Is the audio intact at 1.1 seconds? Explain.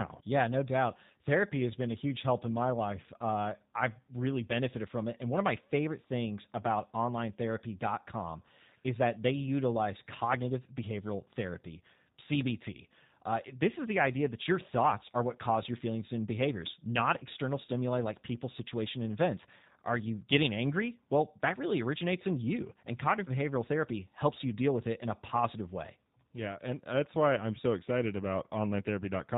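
No. At 1.1 seconds, as throughout the whole clip, the speech sounds plainly rough and faintly synthetic, with a dull, boxy top end where nothing above 4 kHz survives. This is G.729 codec damage, and the character fits a narrowband 8 kbit/s voice stream. The codec does not keep the waveform. It rebuilds each 10 ms frame from a vocal tract filter, a pitch predictor and a few coded pulses, so fine detail is replaced by an approximation.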